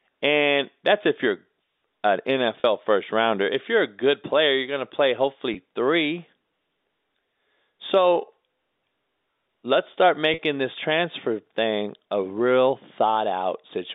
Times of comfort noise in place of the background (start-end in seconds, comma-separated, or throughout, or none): none